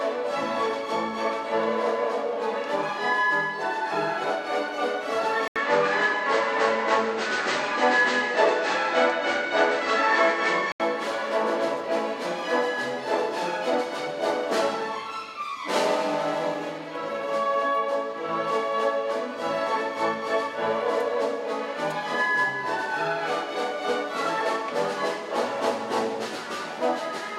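At 5.48 s an 80 ms gap opens, then the sound turns duller, with nothing above 8.5 kHz, a level shift of about 5 dB and a different background hiss, until 10.80 s. The input likely switched to a poorer device; the changed noise floor separates it from a simple filter.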